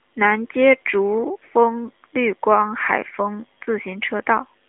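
Speech recording with no technical faults to report.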